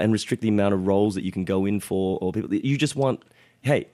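At 1.06 s there is a brief burst of DAB burbling. Weak reception let bit errors, at a low rate, slip past error correction into the MP2 audio. Corrupted samples add short noise blips in single sub-bands.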